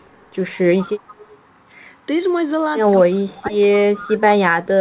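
From 0.78 to 1.35 s an echo leak returns a faint copy of the speech 162 ms late, about 20 dB down. Unlike reverb, it is a distinct repeat, likely from an echo canceller letting loudspeaker pickup through. Between 2.94 and 4.22 s the speech is suppressed in double talk, dipping by as much as about 30 dB for roughly a second in total. This likely happens because the canceller ducked both sides together. Brief echo scraps at 3.73 to 3.78 s and 3.97 to 4.04 s return inside that stretch, with the same 162 ms delay.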